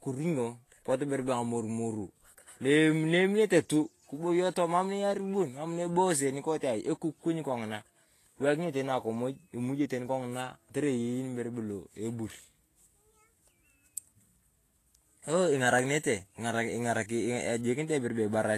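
Throughout, the speech sounds hissy and grainy with nothing above 14.2 kHz, likely Vorbis compression at a low bitrate, around 33 kbps, quantising the treble coarsely. From 15.79 to 16.47 s a gritty crackle is heard: processor overload crackle, where a handful of missed deadlines on very short buffers, under a millisecond, each leave a hard-edged silent gap.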